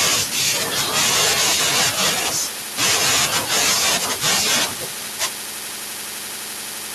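Echo with no canceller runs through the whole clip, from the start to the end. The far end is evidently playing the call over a loudspeaker, its microphone is catching that playback, and nothing is subtracting it before it is sent back. Each stretch of speech returns after a round trip of roughly 400 ms, about 20 dB below the original, as a faint, thinner shadow trailing every phrase.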